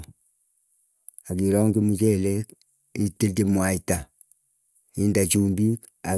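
No faults heard anywhere in the speech: no dropouts, glitches or level problems at any point.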